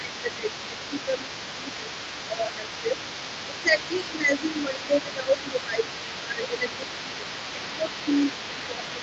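From the start right through to the end, a second voice sits underneath the talker at about 15 dB down. That's the other side's voice leaking through, most likely because the echo canceller didn't fully strip the loudspeaker playback out of the mic.

Over that same stretch, the talker keeps getting pushed down: from 0 to 2.94 s, again from 3.47 to 6.84 s, and from 7.55 s to the end. It dips by about 10 dB at worst. That's speech suppressed in double talk, likely the canceller ducking everything while both sides overlap.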